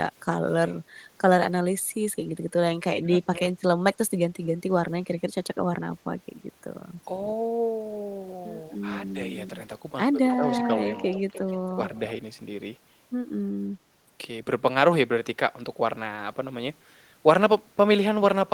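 At 3.01 to 3.12 s and 3.39 to 3.54 s, the speech dips by about 15 dB in short pieces. This is speech suppressed in double talk, likely an echo canceller ducking both sides at once.

From 10.29 to 12.0 s, a delayed copy of the speech returns about 0.3 s late, in scraps at 10.29, 10.54 and 11.95 s and a longer stretch from 11.04 to 11.71 s. It sits roughly 10 to 25 dB below the direct sound. This is echo leak.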